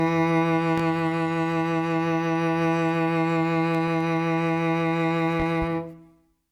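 At 0.78 to 0.81 s there's a loud pop, a single sharp hit sitting around 10 dB above the music, which keeps playing right through it. It sounds like a sudden voltage step got into the signal path, likely from a plug, switch, static discharge or a driver glitch, and the downstream circuitry shaped that step into a short, punchy thump.

Then from 3.75 to 4.01 s you get CD scratch ticks: three small, evenly spaced clicks, each well under a millisecond. That's a blemish on the disc wiping out more data than error correction can rebuild on each revolution, so the player fills in or mutes those few samples and leaves a tiny tick every turn.

Near the end, 5.40 to 5.66 s, there's another loud pop, this time two in quick succession, again around 10 dB over the music. It's the same kind of electrical pulse, likely another plug, switch or static event, landing on top of the audio twice in a quarter of a second.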